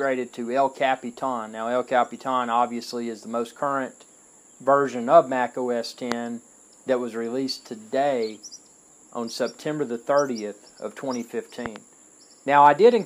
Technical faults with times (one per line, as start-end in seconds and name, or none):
6.12-6.14 loud pop
11.66-11.78 loud pop